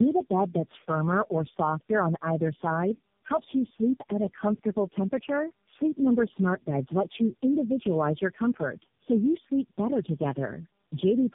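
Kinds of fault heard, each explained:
Tandem speech coding: The speech passed through four low-rate speech codecs in a row, with G.711 links between them, so it was decoded and coded again at each border. The chain ran from AMR-NB through G.729A and G.723.1 and back to AMR-NB. Each coder worked on the last one's damaged output. The result sounds rough, muffled and warbly throughout the clip. Nothing is heard above about 3.6 kHz.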